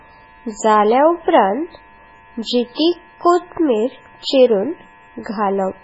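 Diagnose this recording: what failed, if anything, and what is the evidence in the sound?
The speech sounds watery and swirly from start to finish, with sibilants turning into metallic chirps, consonant attacks smeared, and nothing at all above 7.7 kHz. This is likely MP3 compression at the codec stage, and a heavy case. Starved of bits, the encoder cuts the treble at a fixed frequency and drops weak spectral lines that flicker on and off between frames. The damage fits a very low bitrate of around 16 kbps.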